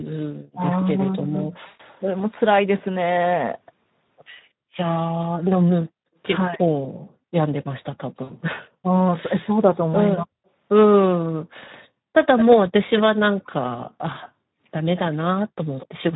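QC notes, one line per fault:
Throughout, Speex codec: the sound is hoarse and grainy. This fits Speex at around 11 kbps, where too few bits remain to code the excitation cleanly.
0.53–2.10 s and 5.07–6.61 s, speech suppressed in double talk: the level ducks sharply, by about 40 dB at worst, and drops out in pieces totalling roughly 0.7 s and 0.5 s. This is likely an echo canceller muting the near side while the far side spoke.
1.67–1.80 s and 8.23–8.31 s, VoIP packet loss concealed by the speech codec: the sound smears into a fading buzzy tone or coloured noise for 120 ms and then 60 ms, which fits several 20 ms frames lost. The decoder extrapolates its last pitch and filter, and recovery lags briefly afterwards.
10.18–10.22 s and 12.37 s to the end, echo leak: a faint, delayed copy trails the sound by 223 ms, a brief scrap at about 15 dB down and then sustained at about 10 dB down. This is likely a far-end loudspeaker echo the canceller failed to remove.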